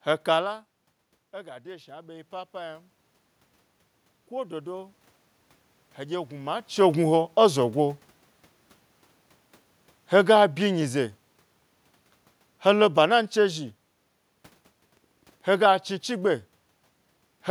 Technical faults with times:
1.31-2.92 automatic gain rising

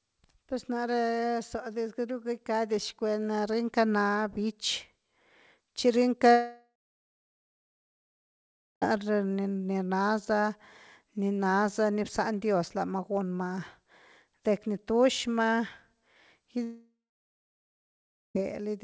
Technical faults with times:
6.32-8.84 long network dropout
16.64-18.37 long network dropout

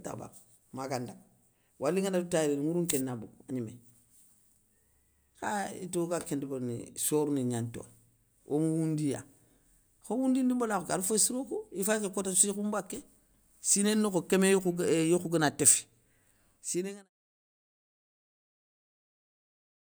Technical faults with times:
none

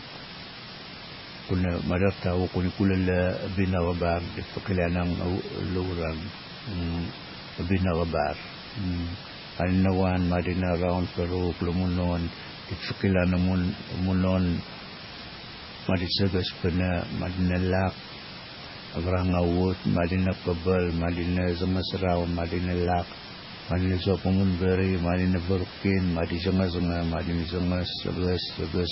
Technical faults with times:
0.00-28.91 low bit depth with dither
0.00-28.91 MP3 compression

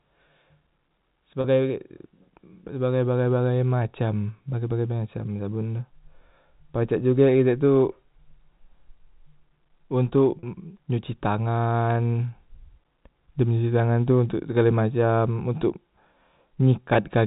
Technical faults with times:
1.41-1.44 packet loss with pitch repetition
10.39-10.43 packet loss with pitch repetition
16.94 packet loss with pitch repetition

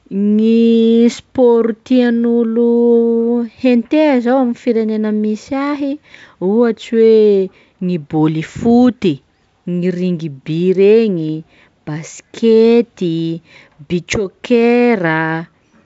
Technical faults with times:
none

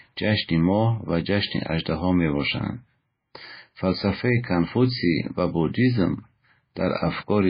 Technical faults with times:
0.00-7.49 MP3 compression

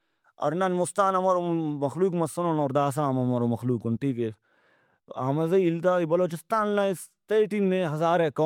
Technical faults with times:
0.00-8.45 generation loss

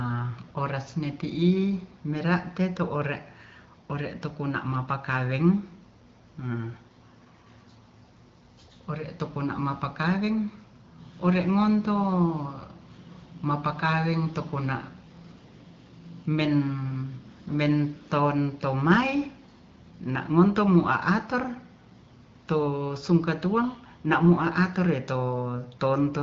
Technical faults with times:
none

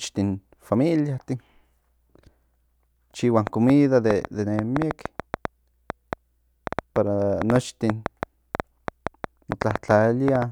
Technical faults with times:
3.47-10.43 train of clicks

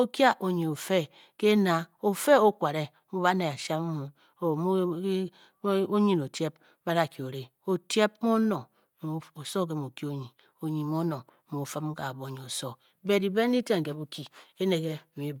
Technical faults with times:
0.00-15.40 Bluetooth LC3 compression

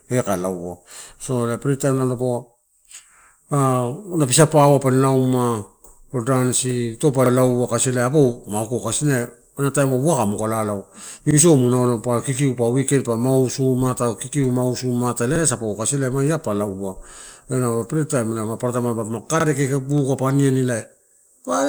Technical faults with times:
3.21-3.26 overlapping chunks
7.26-7.31 overlapping chunks
11.31-11.36 overlapping chunks
15.36-15.40 overlapping chunks
19.40-19.45 overlapping chunks

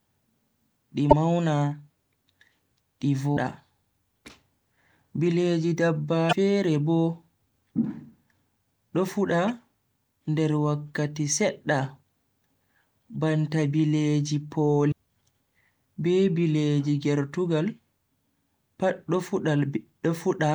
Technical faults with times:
1.10-1.13 damaged data in a compressed stream
3.33-3.38 damaged data in a compressed stream
6.29-6.33 damaged data in a compressed stream
9.48 damaged data in a compressed stream
14.88-14.93 damaged data in a compressed stream

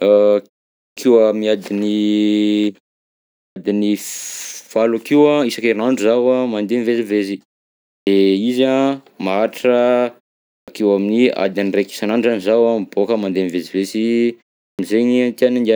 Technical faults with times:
0.87-0.97 clipped start after a pause
3.45-3.56 clipped start after a pause
7.97-8.07 clipped start after a pause
10.56-10.68 clipped start after a pause
14.69-14.79 clipped start after a pause

